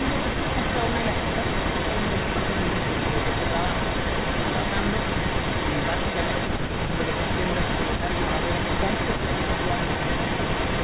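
An echo leak runs through the whole of this speech recording, most likely because a loudspeaker at the far end fed the sound back into its microphone and the echo canceller there failed to strip it out. The result is a second copy of the speech trailing about 360 ms behind the original, at roughly the same loudness, in the narrow telephone band, capped at 4 kHz by the G.711 A-law call path. At 7.97 s there is also speech suppressed in double talk. The canceller, likely confronted with both sides active at once, pulled the level down by about 15 dB for some 50 ms, producing a brief, abrupt dip that reads as a momentary hole in the speech.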